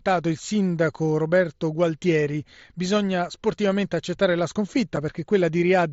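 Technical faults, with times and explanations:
4.96 s, unconcealed Bluetooth headset packet loss: right after "bisogna sportivamente accettare la", the speech cuts out for 7.5 ms, which fits one dropped mSBC packet left unfilled. On the waveform it shows as an abrupt flat gap, and on the spectrogram as a thin blank vertical stripe.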